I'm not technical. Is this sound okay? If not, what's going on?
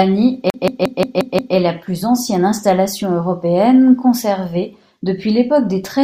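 No, there's a glitch near the start. From 0.5 s to about 1.56 s the speech gets caught in a CD stuck on one turn: a scratch keeps knocking the laser back to the same spot, so one tiny slice of about 0.18 s plays six times over, with a brief drop-out at each jump. You hear it as a quick, even stutter, and then it breaks free right before "la plus ancienne installation".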